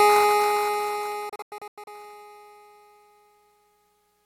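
From 1.29 s to 1.88 s the music breaks up in a digital broadcast dropout. The receiver muted on failed frames, leaving several silent holes totalling 320 ms, the longest 96 ms, each entered with a 3 ms fade. Unlike concealed packet loss, nothing fills the gaps; the programme simply resumes.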